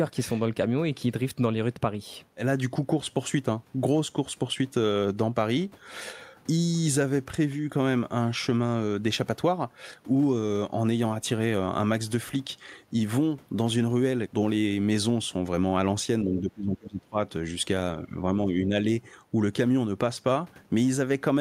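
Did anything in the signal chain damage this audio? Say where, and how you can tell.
Yes. At the call-processing stage, speech dips about 20 dB at 16.23–17.17 s, then more lightly at 18.04–18.15 s and 18.45–18.72 s. This is likely speech suppressed in double talk, with the echo canceller attenuating the talker as echo.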